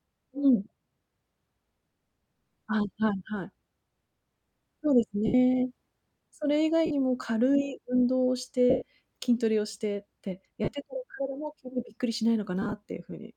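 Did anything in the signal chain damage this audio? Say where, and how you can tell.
Yes, in the wireless codec stage: lost LE Audio frames. Dropouts at 5.26–5.34 s (75 ms), 6.86–6.91 s (45 ms), 8.70–8.82 s (120 ms), 10.64–10.68 s (37.5 ms), and a scattered cluster over 12.62–12.73 s, the longest run about 15 ms. The speech turns into a noisy smear because the LC3 decoder repeats the last spectrum with random signs, and over the 120 ms gap that fill fades toward silence.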